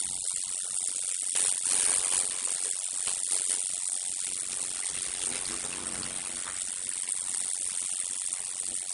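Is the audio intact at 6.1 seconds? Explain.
No. At 6.1 s the audio carries two faults, both present for the whole clip. The first is a block size mismatch (padded): one stage hands over shorter blocks than the next stage reads, and the shortfall in each block is filled with silence. That puts a brief gap in every block, heard as a steady buzz at 91.9 Hz. The sound also runs at 0.533 times normal speed with its pitch roughly unchanged, which fits 256-sample blocks being read into larger ones.

The second fault is watery, swirling texture with smeared attacks and nothing above 11.2 kHz. This is likely MP3 compression at a low bitrate, near 48 kbps. Short of bits, the encoder cuts the treble at a fixed point and drops weak frequency lines, which flicker on and off from frame to frame. The damage is plainly audible at this moment.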